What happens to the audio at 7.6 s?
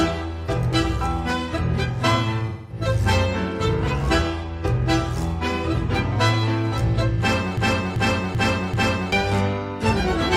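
At 7.58 s the audio falls into a broken-record loop: a fragment of about 0.39 s repeats exactly, back to back, four times until 9.12 s. The stall is likely in the player, encoder or stream, which kept resending the last piece it held, so the audio meant for that span is lost. On a waveform and spectrogram the same shape tiles four times in a row, with abrupt seams at each repeat.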